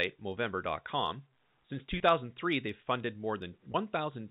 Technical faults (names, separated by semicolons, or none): periodic clock jitter; packet loss with pitch repetition